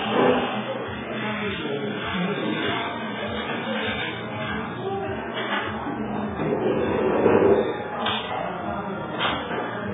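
Throughout, likely heavy AAC compression at a very low bitrate: nothing remains above 3.7 kHz, leaving the sound dull, smeared and warbling.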